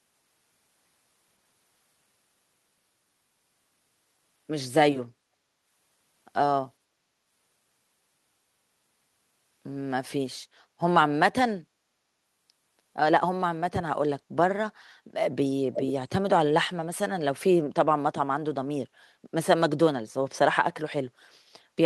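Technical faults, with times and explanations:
10.45–10.79 s, background gated by the echo canceller: the room sound sinks by about 11 dB for roughly a third of a second, then returns. The canceller heard loudspeaker output and clamped the microphone hard, taking the background down with it until it released.
15.74–15.92 s, echo leak: a delayed copy of the speech surfaces about 496 ms behind the original, only about 5 dB quieter. This is likely a far-end loudspeaker pickup that the echo canceller failed to fully remove, so the residue was sent back.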